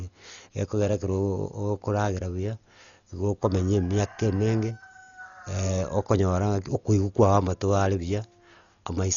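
From start to end the speech sounds dull and heavily damaged, with a rough, fluttering noise clinging to voiced tones, likely from Dolby Digital compression at a bitrate near 40 kbps. A spectrogram shows nothing above 6.9 kHz and patchy, noise-filled bands below it.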